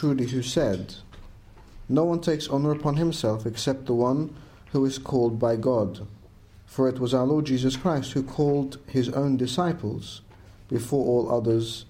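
At about 3.56 s there's a tiny click, and that's a repeated buffer. The playback side didn't get fresh audio in time, so it replayed the last block once more. The repeated piece is only about 1.45 ms long, which fits a 64-sample buffer. At that size the repeat comes across as a click rather than a stutter, with a hard join on each side. Nothing seems to have gone missing, since the sound picks up right where it left off.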